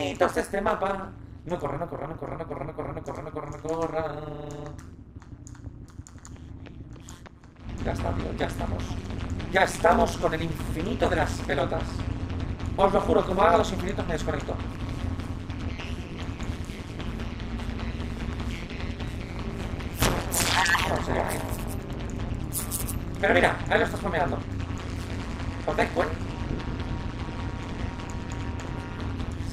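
Overlap-add ripple runs through the whole clip. The audio was split into windowed frames and rebuilt with an overlap that does not add up to a steady gain. So the level dips and recovers once every frame, at a rate of around 150 Hz. The dips are deep, about 60 dB. At that speed the pulsing merges into a harsh metallic buzz with extra tones around each note, laid over all of the sound.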